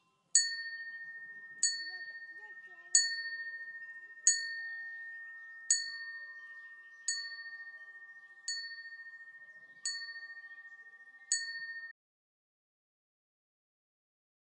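A clip of everyday sound that suffers an audio dropout to silence. At 11.92 s it just stops dead, and the last 2.5 seconds or so, right through to the end, are silent with no room tone or noise floor at all. That kind of hard, total gap likely means the input went away, whether from a disconnected device, a dropped link or an accidental mute, while the recorder kept writing empty samples. Whatever happened during that stretch is lost.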